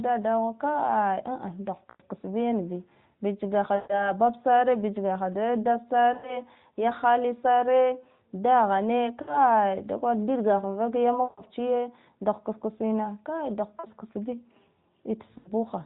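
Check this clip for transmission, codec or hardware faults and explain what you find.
Seven brief dropouts come from lost AMR speech frames, at 1.90, 3.76 (just after "bich gaha"), 6.14, 9.22, 11.24, 13.80 and 15.38 s. The decoder repeats the last good settings with falling gain for up to 140 ms, so the sound smears, fades, then returns rough. The narrowband channel, which cuts everything above 4 kHz, carries them.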